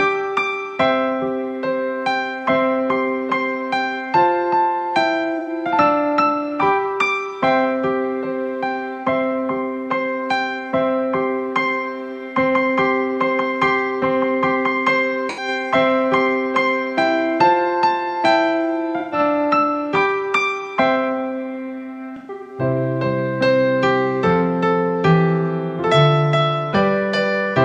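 Smeared, noisy patches break into the sound at 5.39–5.49, 15.29–15.48, 18.99–19.19 and 22.16–22.60 s, the last scattered, its longest run around 150 ms. This is AAC frame loss with concealment: the decoder rebuilds 85–256 ms of missing audio from the last good spectrum.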